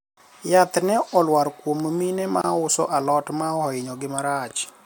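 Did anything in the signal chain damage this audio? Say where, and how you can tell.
Yes: there is a gap at a join of encoded pieces at 2.42 to 2.44 s in this speech clip, a silence of about 25 ms. It is a codec-stage fault, introduced when separately encoded segments were concatenated without trimming. The speech drops out, its edges smeared by the codec, and resumes where it stopped. The gap comes from the second segment's encoder start-up delay and the first segment's padded final frame both being left in.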